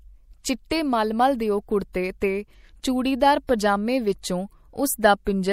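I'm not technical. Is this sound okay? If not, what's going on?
No. MP3 compression damage runs through the whole clip, from start to finish. The speech sounds watery and swirly. This is likely from saving at a low-quality setting: the encoder drops quiet detail, letting some of it flicker in and out moment to moment. That flicker makes the watery texture, and the s sounds turn metallic.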